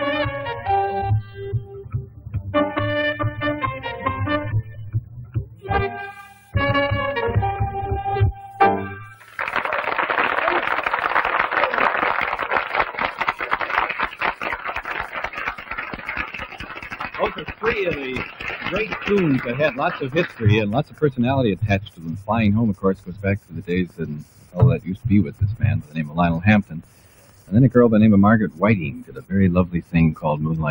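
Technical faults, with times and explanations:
Throughout: noise suppressor applied to music or sounds. A speech-tuned suppressor treats steady parts as noise. Its gain swings by about 15 dB, so the level keeps shifting.
0.31–6.55 s, 8.52–9.22 s, 15.55–19.07 s, 20.27–27.52 s, 28.5–30.23 s: sound cut by the noise suppressor. Steady or fading parts sink, by about 14, 10, 13, 13 and 13 dB at deepest.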